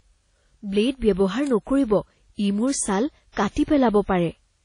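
From the start and through to the end, the speech carries the marks of transcoding between lossy codecs. The band stops at 10 kHz, so the top is dull. Two layers of artefacts sit together and are heard at once. The likely cause is a chain of low-rate encoders. The sound fits HE-AAC at around 40 kbit/s re-encoded to WMA 1 at around 32 kbit/s. The second encoder wastes bits on the first one's damage.

At 1.47 s an electrical switching spike cuts in. It is a sharp burst, only a few milliseconds long. It sits on top of the speech and does not replace it. The likely source is a nearby switch, motor or static discharge. Its brief arcing was picked up by the audio line.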